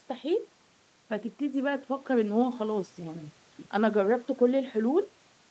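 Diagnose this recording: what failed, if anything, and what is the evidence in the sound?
Nothing stood out on listening; the speech comes through the call's microphone processing and Opus link as expected, with its highs ending around 8 kHz as that call path does.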